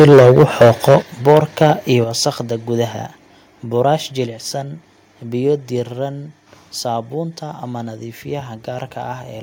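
From 0 to 0.96 s the loudest syllables are flattened and crackle harshly. This is microphone overload, likely from input volume set about 11 dB too high. The peaks are sheared off abruptly rather than softly compressed. At 1.02 s the voice and the background drop together by about 7 dB in one instant step. That is the microphone volume stepped down, likely by the call software reacting to the distortion. Unlike a fade or a noise gate, the level changes in a single jump. A milder overload returns at 1.27–1.68 s, about 4 dB over. Further single steps follow at 2.04 s (about 6 dB), 4.26 s (about 3 dB) and 5.79 s (about 2 dB).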